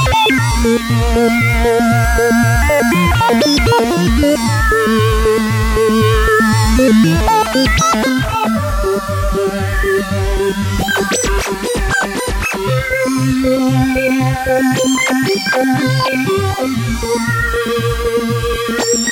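From 8.09 s to the end, channel delay (comb filtering): one channel lags by roughly 20 ms, and summing to mono cuts evenly spaced notches from about 20 Hz upward, giving a rough, slightly doubled sound.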